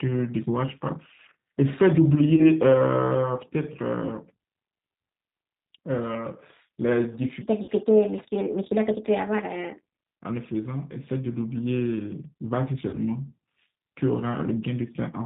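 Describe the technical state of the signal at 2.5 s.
At 2.5 s the audio is just recovering from VoIP packet loss concealed by the speech codec, spanning 2.36 to 2.50 s. A gap of about 20 ms, which suggests a single lost packet, was filled by extrapolating pitch and filter. On a waveform this shows as a fading stretch, and on a spectrogram as a smeared continuation of the preceding sound.

The G.729 codec runs throughout at 8 kbit/s, leaving the speech rough and synthetic. A spectrogram shows a hard ceiling at 4 kHz, with nothing above.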